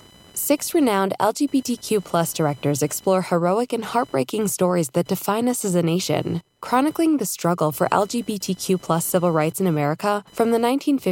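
Changing load from the processor, graphics card or mouse is disturbing the shared ground of the audio circuit, causing computer activity noise throughout the speech. It is a buzzing, chirping whine pulsing at around 1 kHz, roughly 30 dB below the signal, that tracks the computer rather than the speech.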